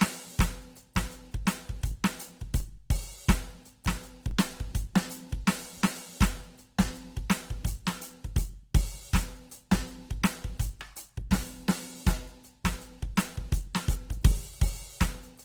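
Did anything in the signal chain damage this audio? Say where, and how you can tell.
Yes. At the codec stage, music throughout has a rough, grainy texture on tones, with the full band kept up to about 20.2 kHz. This points to Opus compression, likely in its music mode at a low rate, near 16 kbps, where starved bands are filled with folded or noisy content.

At the converter or analogue input, DC steps at 2.60 s, 4.31 s and 13.03 s each produce a low thump or click while the music continues unchanged. The waveform's zero line jumps abruptly, then the offset decays away, as a 2 Hz high-pass slowly pulls it back.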